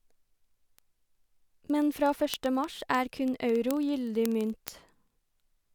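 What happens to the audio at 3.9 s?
A digital link is being read on an unlocked clock running several hundred ppm off, causing word clock ticks throughout 0.12 to 5.75 s, including 3.9 s. Each slip drops or repeats a sample, heard as sharp, uneven ticks about every 30 ms over the speech.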